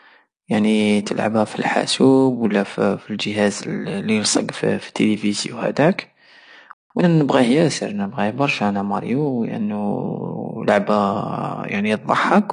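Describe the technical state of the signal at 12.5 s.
At 12.5 s the speech carries the same damage heard throughout: a lowered high-frequency cut-off, a dull top end and a fizzy, warbling texture on sibilants. This is likely AAC compression, a low-bitrate coder discarding and coarsely quantising high bands, consistent with roughly 32 kbps.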